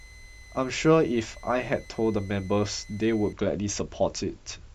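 From the start to about 3.33 s, a switching supply whistle sits under the speech: a thin, high tone around 2 kHz, roughly 25 dB below the speech, wandering slightly between 2.02 and 2.04 kHz. A switching power supply running in an audible burst mode, or beating with another one, causes this. The small pitch drift separates it from a fixed test tone or mains hum, which sits much lower and holds a steady frequency.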